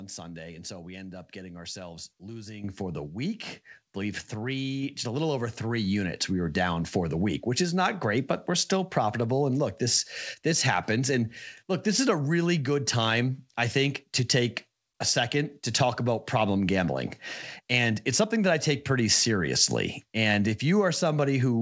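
At 2.64 s there's a microphone volume step-up: the call software decided the input was too quiet and bumped the device's input volume in one jump, about 10 dB. You hear the speech and the background noise get louder together, instantly, with no ramp. Everything after that point sits at the new level. The top end stops at 8 kHz, which fits a wideband call codec like G.722, so the jump comes through that band-limited sound.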